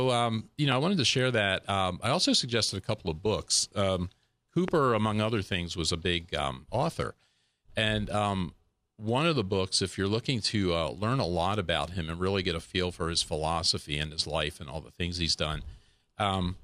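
A sudden voltage pulse, likely from a plug, switch or static discharge, entered the signal path twice, producing a loud pop each time. The first lands from 0.72 to 0.74 s, between "um you know" and "I wanted to share"; the second runs from 4.68 to 4.70 s, just before "among other things was". Each is a single sharp click peaking roughly 15 dB above the speech, which continues underneath without interruption.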